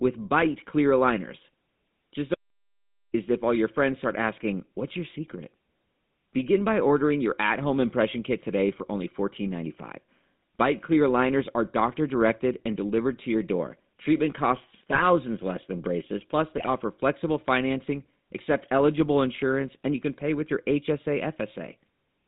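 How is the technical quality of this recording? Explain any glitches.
The recording is degraded throughout by phone-codec coding, with one silent gap and two bursts of decoding damage.

The whole clip carries the GSM full-rate codec sound. The band runs only from about 150 Hz to 3.7 kHz. The voice is plainly buzzy and gravelly, which fits 13 kbps pulse-driven vocal-tract coding.

From 2.35 to 3.14 s there is an audio dropout to silence lasting 0.79 s. It is silent with no room tone, ending before "if all your friends". A lost input link is the likely cause.

GSM bit errors strike at 14.91 to 15.02 s, just before "less than braces plus". They strike again at 16.58 to 16.68 s, before "flexible financing accept eligible". Corrupted frame parameters produce brief squawks and gargling.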